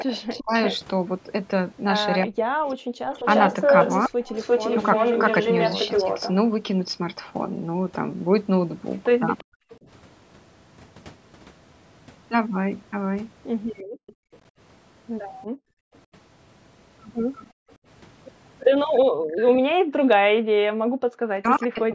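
From 0.0 to 9.73 s, a delayed copy of the speech follows the speech by 349 ms at about the same level. This is likely an echo leak. A loudspeaker's sound reached a microphone, and the echo canceller did not remove it all.

Across 0.04 to 4.23 s, the speech dips in pieces, by around 40 dB at its deepest, for about a second in total. This is likely speech suppressed in double talk. The canceller could not tell the talker from the loudspeaker echo, so it turned both down.

At 2.92 to 3.06 s, the room sound drops out for about 150 ms, by about 40 dB. This is background gated by the echo canceller. It clamped the microphone while the loudspeaker played, then released.

At 9.49 to 9.6 s, the speech cuts out again, deeply, for about 100 ms. This is likely another double-talk suppression.

From 13.79 to 19.4 s, the 349 ms echo returns, now about 20 dB below the speech. Over 13.83 to 20.41 s, the background is gated again, by up to about 40 dB, for about 1.5 seconds in total.

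From 19.57 s to the end, the speech is suppressed again, deeply, for about a second in total.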